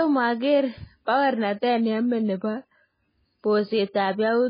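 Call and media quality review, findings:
Watery, swirly speech with no treble above 5 kHz throughout; likely MP3 compression at a very low bitrate, fitting roughly 16 kbps, zeroing weak frequency lines.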